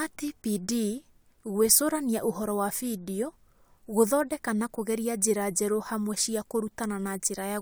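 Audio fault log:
No technical faults can be heard in this speech recording, whose signal stays steady and intact from its opening moment to its close.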